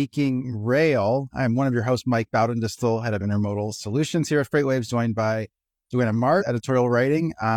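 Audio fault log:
6.37–6.43 s, damaged data in a compressed stream. A brief glitch breaks the speech. Corrupt frames throw the decoder out of sync until the next header.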